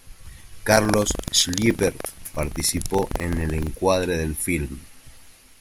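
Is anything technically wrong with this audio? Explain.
Yes. From 0.68 to 3.71 s there is buffer tearing: the writing program and the playback hardware have slipped out of step, so a small slice of each buffer holds audio about 150 ms stale, hard-joined on both sides. This gives a 23.4 Hz robotic buzz over the speech, which fits a 2048-sample buffer.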